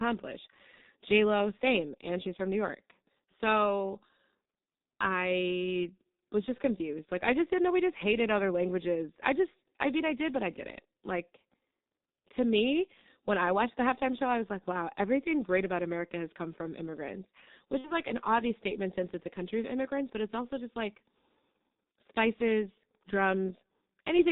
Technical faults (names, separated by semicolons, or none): G.723.1 codec; VoIP packet loss concealed by the speech codec